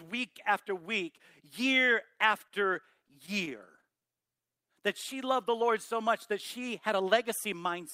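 Repeated stalls (stutter) run from 2.15 to 4.03 s. Packets reached the receiver late or more slowly than playback consumed them, so the jitter buffer emptied fourteen times across this stretch. Each time, the receiver stretched the last sound to cover the wait, adding 159 ms in all, with the longest gap 28 ms. About 8% of the span is filled this way and no speech is lost, but the delivery catches and hesitates in short, uneven hitches.

A jitter buffer slow-down follows from 4.12 to 4.75 s. The buffer held too little audio, so the receiver rebuilt its reserve by repeating single pitch periods and fragments of pauses many times in succession, inserting 89 ms. Playback drops to 87% of normal speed while the pitch stays put. The speech sounds drawn out and slightly sluggish, with syllables lingering longer than they naturally would.

A jitter buffer speed-up occurs from 7.29 to 7.81 s. Here the buffer had built up more audio than its target, and to reduce the delay the receiver cut out short pieces one or a few pitch periods long, over and over, removing roughly 40 ms. 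The speech plays at 106% of normal speed at an unchanged pitch, so this closing stretch sounds a little hurried and clipped in its timing.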